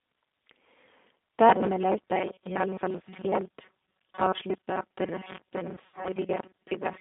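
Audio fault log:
Throughout: G.729 codec. The sound is confined to a narrow line band of about 200 Hz to 3.7 kHz. Speech is rebuilt from a vocal tract filter, a pitch predictor and a few pulses per frame at 8 kbit/s. That coarse model leaves the speech plainly rough and synthetic.
1.49 to 7.01 s: robotic sound from repeated short buffers. A rigid, metallic buzz at 188 Hz sits over most of the speech from here to the end. It likely comes from new audio arriving too seldom, so the last 5.3 ms gets replayed while real audio is skipped.
5.75 to 6.09 s: VoIP packet loss concealed by the speech codec. About 140 ms of audio drops out in gaps scattered over 260 ms, the longest gap 60 ms. The decoder stretches its last pitch and filter into a fading buzzy tone or coloured noise. The speech stays weak until it recovers.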